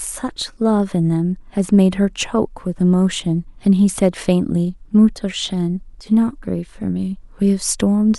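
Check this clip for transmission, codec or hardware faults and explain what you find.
The speech signal holds steady throughout, with nothing audible that points to any fault in how it was carried or captured.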